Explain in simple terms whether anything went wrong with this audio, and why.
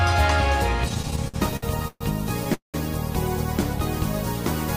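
Repeated stalls (stutter) run from 0.89 to 2.03 s: thirteen brief hiccups, the longest 0.13 s, where late data forced the last sound to be stretched, so the audio drags.

A call audio freeze at 2.54 to 2.76 s is one longer pause, fading to silence for 0.13 s, likely from held-up data. Unlike the stutter, it is a single gap.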